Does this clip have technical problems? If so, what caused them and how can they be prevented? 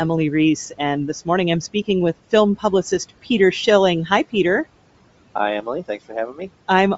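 Yes. Noise suppressor artifacts run through the whole clip. The room noise sits about 20 dB below the speech, and the suppressor pulls it down by about 18 dB between phrases, then lets it rise under speech. Prevention: reduce suppression depth or lower the room noise at the microphone.

Throughout, the speech has a breathy, grainy upper edge with thin, noise-like treble, plainly audible. This is likely Bluetooth LC3 compression at a low bitrate, around 32 kbps, filling zeroed high bands with noise. Prevention: use a higher LC3 bitrate or a wired link.

At 2.91 s there is a short smeared, noisy blip from a lost LE Audio frame. The decoder replayed the previous spectrum with randomised phase for a single 7.5 ms frame. Prevention: improve radio conditions, such as reducing distance and interference, so frames arrive intact.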